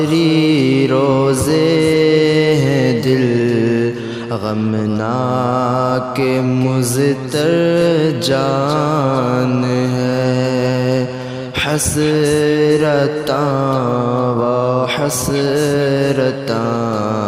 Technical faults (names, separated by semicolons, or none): MP2 compression